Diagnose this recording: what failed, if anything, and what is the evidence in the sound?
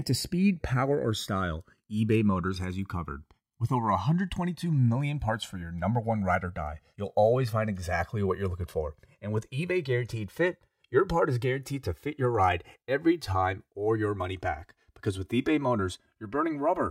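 A slow flanging sweeps through the speech throughout: channels drifting apart at the converter stage, separate clocks roughly 150 ppm off, delay reaching about 3 ms.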